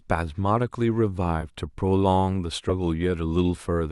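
The clip is speech, and it has two compressed frames skipped. At 1.41 to 1.44 s, about one frame is lost, roughly 20 ms of sound. At 2.69 to 2.72 s, a longer piece goes, roughly 70 ms, which fits about three 20 ms frames. The decoder never plays those frames. They were missing or rejected as damaged. So the sound jumps forward.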